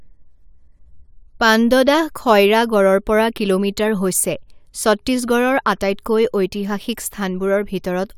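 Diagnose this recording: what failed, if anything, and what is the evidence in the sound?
Nothing in the chain audibly failed: the speech signal keeps a steady level and unbroken continuity throughout, leaving no evidence that points to any stage.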